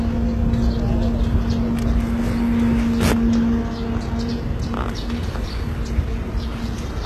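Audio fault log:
Throughout, HE-AAC compression: the treble sounds gritty and metallic, and the damage is heavy. This is likely from spectral band replication, where the upper bands are copied from lower ones and shaped only coarsely, so their harmonics fail to line up with the true content. The heavy damage fits a very low bitrate near 16 kbps. A spectrogram would show nothing above 12.3 kHz and treble that repeats the lower bands' pattern in blocky shapes.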